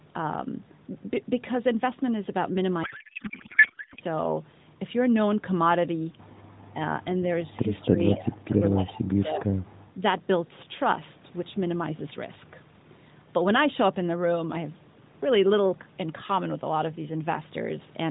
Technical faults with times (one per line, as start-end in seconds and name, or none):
2.84-4.02 codec payload misread